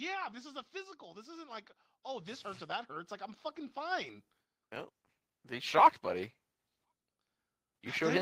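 From 0.05 to 0.73 s, automatic gain falling pulls the speech down by about 3 dB; the background sinks with it, unlike a talker turning away. Automatic gain rising then lifts everything by about 11 dB from 0.71 to 4.17 s, and again by about 3 dB from 5.47 to 6.38 s. Noise swells alongside speech, so it isn't a louder talker.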